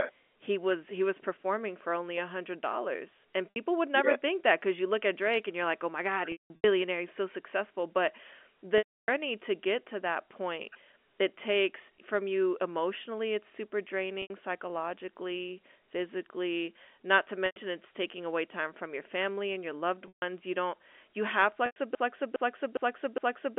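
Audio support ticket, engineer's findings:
Packet loss with pitch repetition, seven dropouts: 3.51 to 3.56 s (60 ms lost, right after "a hundred dollars and"), 6.32 to 6.64 s (260 ms scattered, longest run 180 ms), 8.78 to 9.08 s (300 ms), 14.22 to 14.30 s (80 ms), 17.46 to 17.56 s (100 ms), 20.08 to 20.22 s (140 ms), 21.66 to 21.76 s (100 ms, after "you don't you have"). Receiver concealment loops the last pitch period. The shorter gaps give a held, buzzy tone, and the 180 ms and 300 ms runs fade toward silence. Spectrogram: flat, frozen harmonic stripes decaying to blank. Waveform: identical repeating cycles shrinking in amplitude, then a cross-fade back.

Broken-record loop, 21.95 s to end of file, starting just after "you don't you have". A 410 ms fragment repeats back to back four times, and the audio that should follow is never heard. Likely a stalled player or stream buffer resending its last held chunk. 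Waveform: the same envelope block tiled at exact 410 ms spacing. Spectrogram: an identical pattern stamped repeatedly, with a seam at each restart. The line band of about 250 Hz to 3.5 kHz, typical of G.711 A-law, is visible throughout, including in the looped section.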